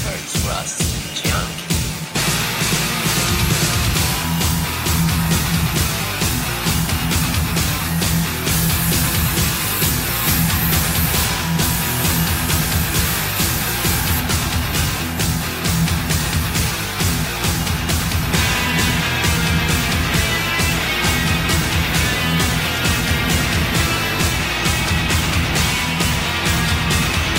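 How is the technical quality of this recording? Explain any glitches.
There are two glitches, at 11.13 s and 17.43 s. Each is a jump where the sound skips ahead by about 40 ms, likely a dropped buffer (overrun).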